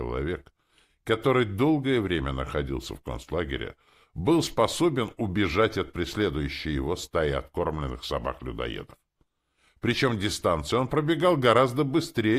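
No technical faults can be heard anywhere in the audio; the signal stays continuous and stable throughout.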